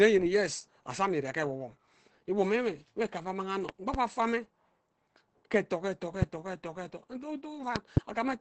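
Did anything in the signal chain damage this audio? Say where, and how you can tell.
Yes. The whole 8-second speech clip shows codec damage, likely from Opus compression. Nothing is present above 8.6 kHz, which fits wideband operation. The sound is heavily degraded, muffled and hoarse. That character points to the encoder's speech (SILK) mode at a low rate, around 12 kbps. Starved of bits, it models speech coarsely and discards fine detail. The damage sits at the codec stage, not in playback.

There are two loud pop events, each made of two pops in quick succession. The first runs from 3.69 to 3.97 s and peaks roughly 10 dB above the speech. The second runs from 7.76 to 8.00 s and is louder, around 20 dB above. The speech continues underneath both. A sudden voltage step, likely from a plug, switch or static discharge in the analogue wiring, was added to the signal, and the circuits after it shaped each pulse.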